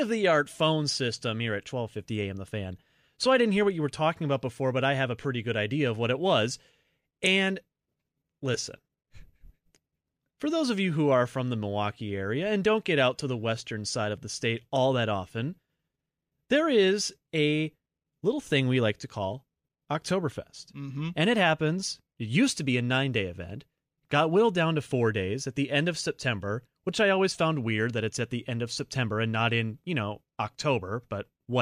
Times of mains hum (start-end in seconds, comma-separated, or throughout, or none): none